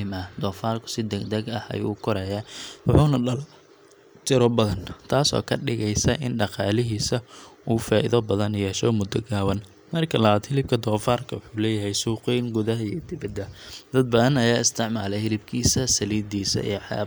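At 3.16 s, just after "korayaa wuxuuna", a bit error spike: one flipped bit makes a single sample jump to about -23 dBFS, heard as a sharp tick, a thin vertical line across the spectrogram.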